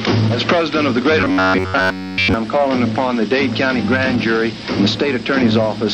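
From 1.19 to 2.34 s, a metallic buzz at 93.8 Hz sets in. This robotic sound likely comes from repeated short buffers of about 11 ms each.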